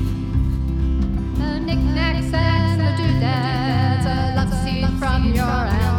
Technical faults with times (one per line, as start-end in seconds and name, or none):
0.00-5.98 doubled audio track